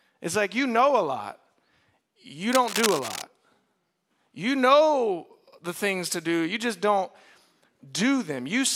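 From 2.52 to 3.22 s, a dense, uneven scratching rustle sits just under the speech. This is cable scratch noise, likely from a worn cable or connector shifting so its contact resistance jumps about. Unlike steady hiss or isolated clicks, it arrives in irregular bursts.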